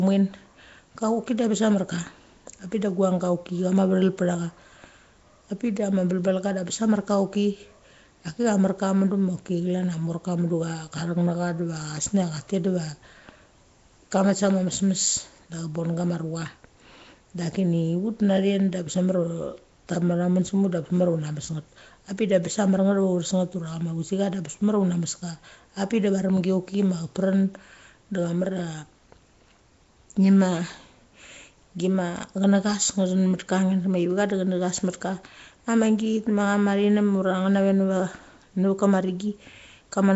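A speech recording that sounds like it went through Nellymoser compression for its whole length, most likely the old Flash microphone codec. The damage is plainly audible: there's a rough, hissy halo around the speech and a smeared, underwater feel, as quiet bands get starved of bits and filled in with noise. Nothing comes through above about 7.7 kHz, and the overall coarseness fits a stream running at roughly 32 kbps.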